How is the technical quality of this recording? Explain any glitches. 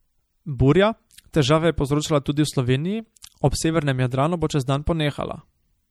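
The recording is noticeably degraded by compression throughout. Across the whole speech clip, the likely cause is MP3 compression at a low bitrate, consistent with about 64 kbps. With so few bits, the encoder discards treble and weak frequency detail frame by frame, leaving plainly audible damage: a dulled, watery, swirling quality on the speech.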